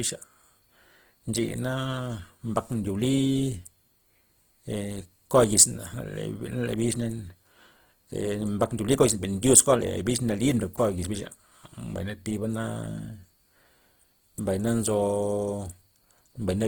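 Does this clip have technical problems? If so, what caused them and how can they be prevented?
Yes. Opus compression runs throughout the speech. It sounds grainy and rough rather than swirly like MP3, because starved bands are filled with noise instead of left empty. This likely comes from a rate near 16 kbps. Encoding at a higher bitrate would prevent it.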